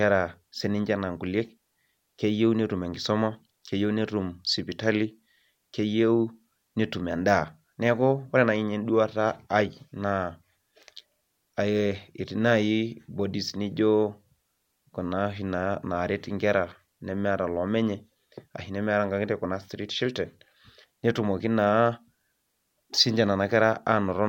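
Speech recording, no technical faults detected.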